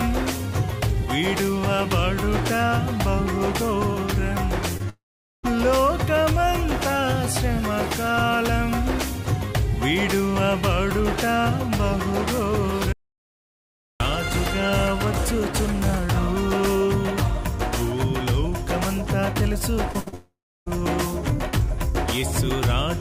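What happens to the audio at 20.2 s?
Right around there you get a short concealed packet loss from 20.08 to 20.14 s: about 40 ms went missing, so the decoder stretched the last sound into a quick smear.

That runs straight into what's likely a long network dropout from 20.14 to 20.68 s. The continued sound fades out, leaving roughly a third of a second of silence before audio resumes minus the lost stretch.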